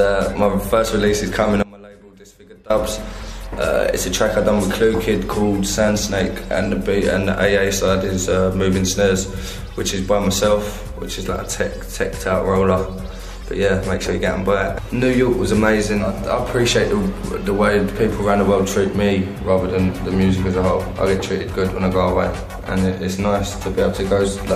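At 1.63 s the sound cuts off abruptly, and for about 1.07 s, until 2.70 s, only a faint trace of it remains, roughly 25 dB below its normal level, before it snaps back mid-flow. This is an audio dropout to a faint residue. The wanted signal was likely lost somewhere upstream while everything after the break stayed live, so the gap carries a weak leak rather than true silence, unlike a natural pause or a fade.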